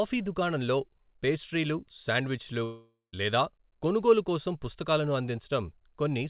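Speech, carried over a narrowband call path whose content stops at 4 kHz, which fits G.711 mu-law at 64 kbps. From 2.64 s to about 3.16 s the speech breaks off into a fading buzz that trails into silence, and it resumes with about 480 ms of material missing. This is likely a long network dropout, where packets stopped arriving and the receiver stretched the last sound to conceal the gap.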